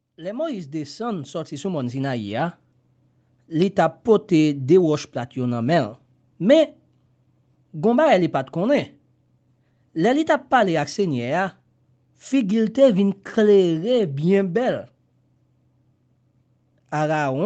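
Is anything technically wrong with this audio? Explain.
Yes. From 0.05 to 3.85 s there is automatic gain rising. The gain control judged the speech too quiet and raised its gain slowly, by about 13 dB. Voice and background swell together over those opening seconds. Audible content stops at 8 kHz, consistent with the call path.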